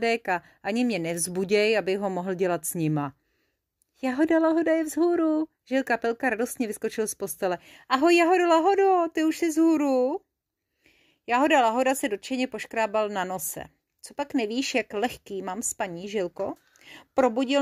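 No technical faults are audible.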